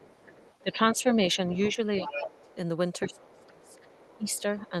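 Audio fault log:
0.00–0.62 s, 1.34–1.73 s, 2.05–2.55 s, 3.06–4.69 s, other side's voice leaking through: a second, fainter voice sits under the main talker. It is about 30 dB down in the first and last stretches but rises to about 15 dB and about 10 dB below the speech in the two middle ones. The likely cause is loudspeaker playback of the far end reaching the microphone and not being fully removed by the echo canceller, so residual echo passes into the send path.
0.62–1.45 s, 1.76–2.51 s, 3.07–3.77 s, 4.17–4.73 s, speech suppressed in double talk: the main talker's level drops and parts of the speech thin out or duck away. The deepest dips are about 10, 20, 25 and 15 dB, affecting roughly half a second, half a second, 0.7 s and 0.2 s of speech respectively. This likely comes from the echo canceller failing to tell near-end speech from echo during overlap and attenuating both, which cuts into the wanted voice.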